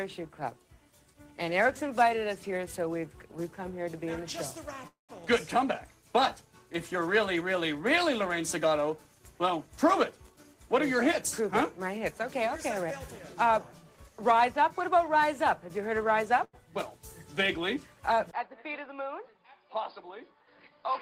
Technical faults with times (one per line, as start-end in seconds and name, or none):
4.87-5.12 call audio freeze
10.30-11.98 jitter buffer speed-up
16.44-16.56 short stall from a late packet
18.31-21.01 input switched to a poorer device